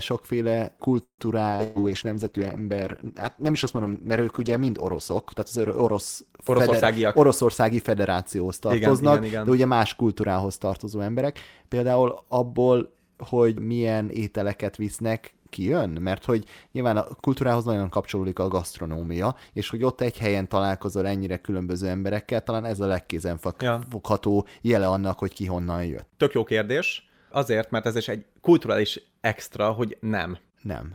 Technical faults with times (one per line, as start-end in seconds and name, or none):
1.03-1.26 call audio freeze
1.55-9.27 call bitrate drop
1.55-1.62 short concealed packet loss
1.63-1.78 burst of packet loss
6.49-7.72 jitter buffer speed-up
11.67-11.90 jitter buffer speed-up